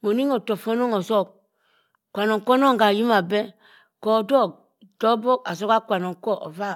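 No technical faults can be heard anywhere in this speech recording. Nothing in the signal points to a problem at any moment.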